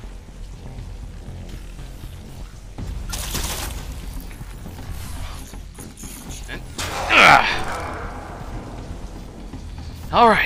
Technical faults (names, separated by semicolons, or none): none